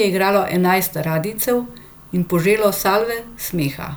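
No technical faults can be heard anywhere in the speech recording, with the signal holding steady and continuous throughout.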